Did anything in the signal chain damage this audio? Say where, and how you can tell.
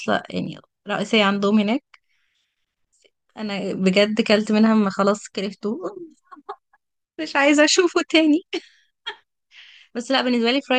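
No, nothing in this speech recording stood out as damage from any stage of the signal chain on listening.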